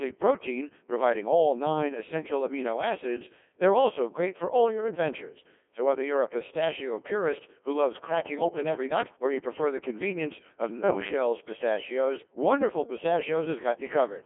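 From start to end, the speech passes through a Codec 2 vocoder. The waveform is discarded and rebuilt from sine waves. The voice sounds robotic and buzzy, heavily damaged, which fits a rate near 1.6 kbit/s. The band runs from 250 Hz to 3.4 kHz, with nothing above 3.5 kHz.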